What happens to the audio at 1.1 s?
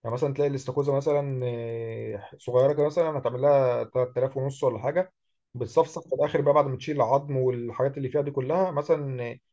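At 1.1 s the speech carries a steady ticking at 10 per second, running from the start to 3.2 s and heard only under signal. That is a resampler restarted on every block: each 100 ms block, likely converted from 24 kHz to 16 kHz, was processed alone, leaving a small error at every block edge.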